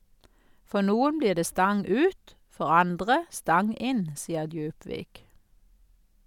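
No technical faults occur at any point in the recording, so there is nothing to place in time order.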